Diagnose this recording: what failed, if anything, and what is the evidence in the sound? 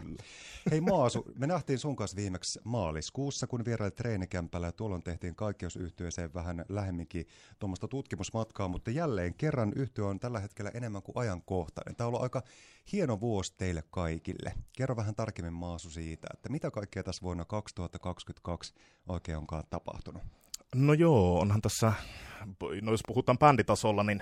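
Nothing in the chain seems to have failed here: the speech comes across steady and intact throughout, with nothing in the sound pointing to a problem at any stage.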